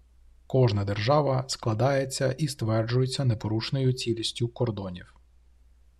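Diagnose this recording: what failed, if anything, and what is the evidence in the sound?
Channel delay (comb filtering) runs from 3.64 to 5.55 s in this speech clip. Across that stretch the top end turns dull and slightly veiled, then clears again. One channel lags the other by only about a sample, roughly 0.02 ms, and when the pair is summed to mono the first cancellation notch lands near 20 kHz. That makes the effect a gentle high-frequency loss rather than a hollow phasiness. The offset points to a driver or buffer alignment slip before the mono mixdown.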